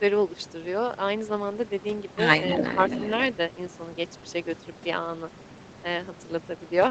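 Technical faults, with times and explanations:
2.47 to 3.1 s, echo leak: a delayed copy trails the speech by about 278 ms at fairly high level, likely loudspeaker pickup escaping the echo canceller; spectrogram shows doubled, offset harmonics.
2.6 s, speech suppressed in double talk: a brief dip of roughly 5 dB lasting about 50 ms, likely the canceller ducking during overlap; waveform shows a short notch.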